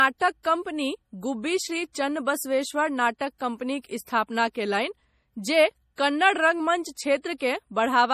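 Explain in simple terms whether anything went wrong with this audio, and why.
MP3 compression, likely, throughout the whole clip: the speech sounds watery and swirly, and nothing above 15 kHz survives, because too few bits were spent.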